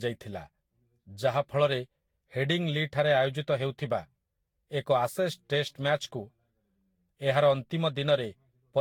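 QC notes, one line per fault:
Throughout: generation loss. The speech has a swirly, smeared, hollow quality that's worse than a single lossy pass would give. Consonant onsets blur, and there's nothing above about 19.1 kHz. The likely cause is around seven rounds of lossy encoding with Vorbis, at rates that point to somewhere near 67 to 73 kbit/s. Each re-encode quantises again on a shifted frame grid, so the noise and spectral holes keep piling up.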